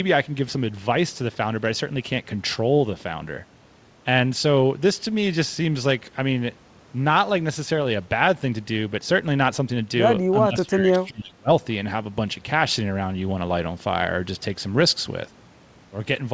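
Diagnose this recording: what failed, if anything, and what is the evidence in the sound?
The failure is in call processing: speech suppressed in double talk. From 10.47 s to 11.5 s the talker's level drops sharply, by something like 25 dB at its deepest, for roughly a second in total, and then comes back. That's likely the echo canceller's suppressor kicking in while the far end was talking over this side. It couldn't tell the near talker apart from its own loudspeaker echo, so it pulled both down. The G.722 path's ceiling at 8 kHz holds throughout.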